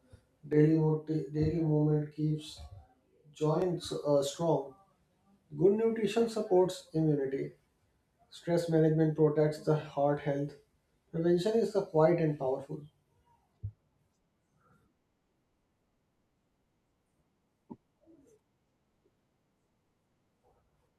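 Channel delay (doubling) affects this speech clip from 0.53 to 3.62 s, just before "uh strong": one channel runs 40 ms late and, summed to mono, repeats as an equal-level slap.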